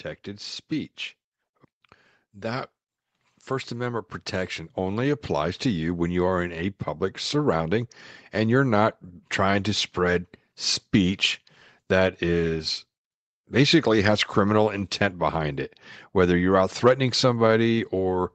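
A speech clip carried over a call, with content stopping around 8 kHz, consistent with a low-bitrate Opus connection. From 3.49 to 6.57 s the level climbs by about 6 dB as automatic gain rising sets in: the gain stage judged the input too quiet and eased its amplification upward over roughly three seconds, settling before "public surrounding and you're". Unlike a talker leaning closer or speaking louder, the background noise swells in step with the voice, and the rise is a slow, even ramp rather than a sudden jump.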